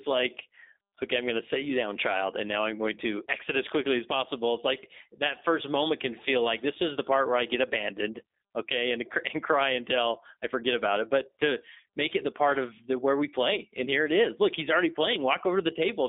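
G.729 codec coding runs throughout this speech clip, with the line band confined to roughly 250 Hz to 3.7 kHz. The sound fits an 8 kbit/s G.729A stream: each 10 ms frame is rebuilt from a vocal tract filter, pitch prediction and sparse pulses, leaving audibly rough, synthetic-sounding speech.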